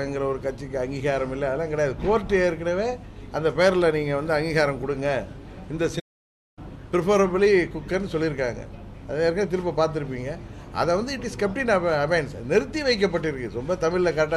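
At 5.99 s the player likely ran out of buffered data or had its output thread blocked, producing a playback stall: the sound halts abruptly mid-flow, the output falls completely silent for 0.57 s, and sound resumes at 6.59 s.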